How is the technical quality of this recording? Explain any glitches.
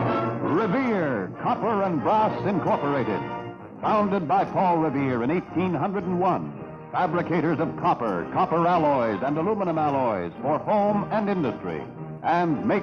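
The technical quality holds up well, and there are no glitches to explain.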